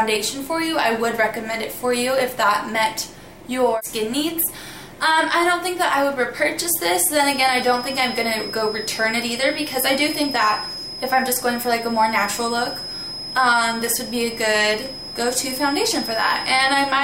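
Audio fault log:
7.15–17.04 s feedback whistle: thin, steady 5.1 kHz tone roughly 10 dB under the sound, likely a loudspeaker-to-microphone loop held just short of runaway.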